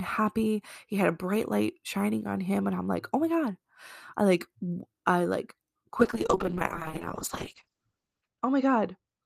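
At 6.0 s, just after "I like I like", a call bitrate drop sets in and lasts to the end of the clip. The encoder was handed far fewer bits, and the speech turns coarse and watery, consistent with a fall from around 48 kbps to about 8 kbps. Audio bandwidth narrows from 20 kHz to 8 kHz, so the top end above 8 kHz is lost and the voice sounds muffled. The lowest quality holds for about 2.29 s.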